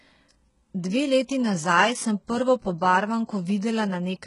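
Speech with heavy HE-AAC compression damage throughout. Nothing reaches above about 11.1 kHz. The upper band is likely rebuilt by spectral band replication, so s sounds turn gritty. The damage fits a bitrate near 12 kbps.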